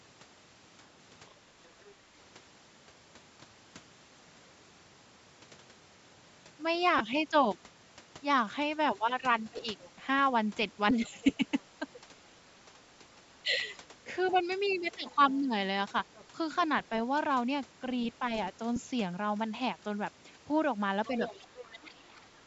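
From 1.29 to 1.93 s a faint second voice sits far beneath the talker, about 30 dB down. This is the other side's voice leaking through, likely loudspeaker playback that the echo canceller failed to remove from the microphone. It returns at 9.8 to 9.9 s (about 25 dB down), 10.94 to 11.6 s (about 20 dB down), 14.24 to 16.25 s (about 25 dB down) and 21.06 to 21.87 s (about 15 dB down), growing more audible by the end. Unlike a frame loss, it adds a separate voice rather than breaking the talker's sound.

Short dropouts come from lost LE Audio frames, at 6.98 to 7.01 s (22.5 ms), 9.57 to 9.59 s (15 ms), 15.89 to 15.91 s (15 ms) and 18.76 s (7.5 ms). These lengths fit whole 7.5 ms frames. The decoder repeats the last spectrum with scrambled phase, so each gap is a brief noisy smear rather than clean silence or a click. All of these gaps are too short to fade fully away.

Speech suppressed in double talk appears where the leaked voice overlaps the talker. 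From 11.37 to 12.06 s the talker dips a few dB in brief patches. From 21.44 to 22.34 s the drop is deep, roughly 15 dB, over most of a second. This is likely the echo canceller turning everything down when it cannot separate the near talker from the echo. It is tied to the overlap.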